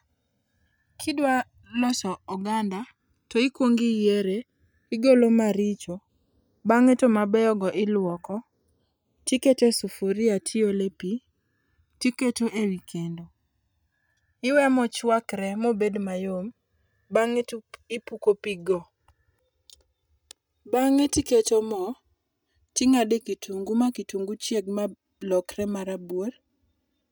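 Channels drifting apart runs through the whole speech clip. The two channels were captured on separately clocked devices, mismatched by something like 200 parts per million, so their offset slowly grows to around 4 ms. Summed to mono, comb notches sweep gradually, giving a slow flanging.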